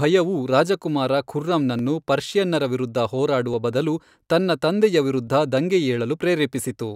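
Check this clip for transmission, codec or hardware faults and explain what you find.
A regular click recurs in the speech, about three times between 1.79 and 5.27 s, spaced 1.74 s apart. These are likely clock drift buffer slips. Two devices each run on their own clock, and one runs fast against the other. The buffer between them creeps toward full or empty, then drops or repeats a short block of samples. Each slip is heard as a brief click over the speech. The spacing fits a clock error of a few hundred parts per million.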